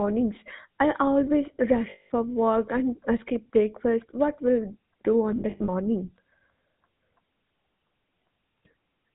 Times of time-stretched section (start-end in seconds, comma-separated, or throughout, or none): none